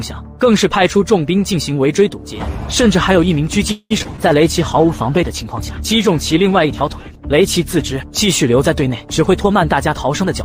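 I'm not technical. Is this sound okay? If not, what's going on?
No. There are three problems.

From 3.71 to 4.19 s there is repeated packet loss, which gives a robotic sound. Bits of audio went missing four times. The longest gap was 0.19 s. Each hole was patched by stretching the last sound, so it turns choppy.

From 4.23 to 7.99 s there is a call bitrate drop. The connection allowed far less data, so the audio was squeezed much harder. It sounds rough and muffled, with the crisp top end missing, for almost four seconds.

Near the end there are two jitter buffer speed-ups, from 9.19 to 9.48 s and from 9.94 s to the end. Audio had piled up, so tiny slices were cut out to catch up. The sound runs 11% and then 7% faster without changing pitch, and feels hurried.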